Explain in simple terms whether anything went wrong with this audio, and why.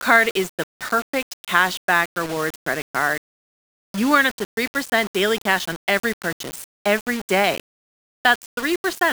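Low bit depth without dither runs through the whole recording, from start to finish. The speech sounds grainy and rough, and the grit rises and falls with the voice, harshest on the quietest sounds. That points to the sound having likely been stored with very few volume steps, which fits about 5 bits, and each sample was simply rounded to the nearest step. Because nothing masks that rounding, the error tracks the voice and is heard as distortion.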